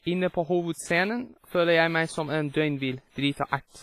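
From start to finish the speech carries heavy codec damage, most likely WMA compression. There's a ringing, washy quality, and a hiss that swells and falls with the speech. That's a transform codec spreading its quantisation noise over long blocks, so it smears across tens of milliseconds around each sound. Weaker spectral detail has been dropped entirely, and nothing survives above 15.5 kHz, which fits a low bitrate somewhere around 24 kbps.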